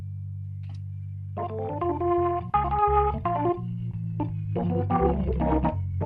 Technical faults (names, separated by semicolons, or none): none